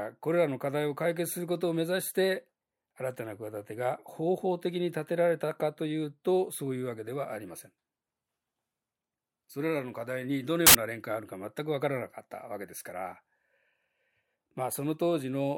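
A speech recording in which, from 10.67 to 10.75 s, the signal is abruptly replaced by about 80 ms of loud, harsh broadband noise that cuts straight across the speech and stops as suddenly as it began. This is a case of samples built from the wrong bytes: for that stretch the reader assembled each sample with its bytes misordered or misaligned, so the rapidly fluctuating low-order bits landed in the most significant position and turned the waveform into broadband noise.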